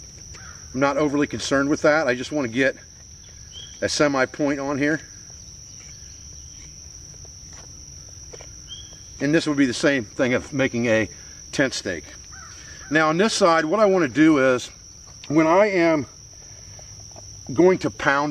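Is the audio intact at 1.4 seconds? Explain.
Yes, the audio at 1.4 seconds is intact, with no dropout, click, distortion or other fault to be heard at that moment.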